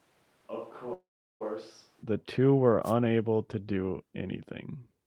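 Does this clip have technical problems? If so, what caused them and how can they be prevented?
Yes. From the start to 2.02 s the sound is hollow, roomy and thin in the bass, roughly 10 dB quieter, with more background noise, and then it changes abruptly to a fuller sound. This is likely a switch to a distant microphone, where a far-off mic replaced the close one. Monitoring the close mic's signal and recording it as a backup track prevents this.

From 0.93 to 1.43 s the sound stops and a fading buzz stretches for about 0.47 s, with roughly 0.38 s of near silence, before resuming where it stopped with nothing lost. This is likely a call audio freeze: delayed packets emptied the jitter buffer, so the receiver padded the gap. A steadier network connection or a larger jitter buffer prevents it.

From 2.83 to 2.94 s a short swish of static is heard. This is a wireless microphone noise hit: the FM radio signal faded as reflections cancelled, and receiver noise rose through the audio. 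Keeping a clear line of sight and using diversity receivers prevents it.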